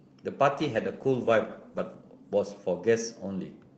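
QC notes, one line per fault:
0.53–3.15 s, call bitrate drop: the encoder's bitrate fell, sounding like about 32 to 11 kbps, so Opus coded speech coarsely and roughly, worst for 1.3 s.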